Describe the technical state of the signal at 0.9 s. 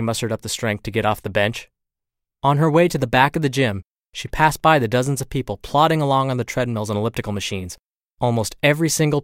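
At 0.9 s the speech signal is intact, with no audible fault at that moment.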